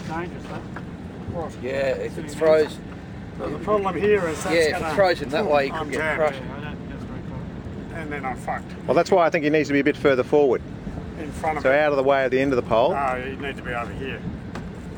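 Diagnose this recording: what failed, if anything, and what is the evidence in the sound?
Imaging from linear upsampling runs throughout. The stage is sample-rate conversion, which fits a 24 kHz source raised to 44.1 kHz. Straight-line interpolation filters weakly. The top is dulled, and a faint mirrored band, roughly 40 dB down, sits from 12 kHz to 24 kHz, adding light metallic shimmer.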